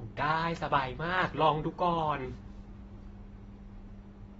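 The encoder has likely squeezed this speech into AAC compression at a low rate, with a bandwidth that fits roughly 24 kbps AAC-LC. To save bits, it discards everything above about 7.6 kHz and quantises the remaining bands coarsely, leaving gaps that shift from frame to frame. From start to finish the damage is plainly audible: the speech sounds dull and smeared, sibilants turn fizzy, and held sounds take on a warble.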